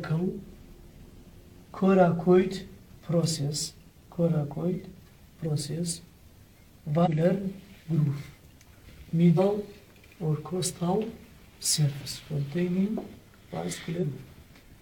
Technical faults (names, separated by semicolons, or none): compressed frames skipped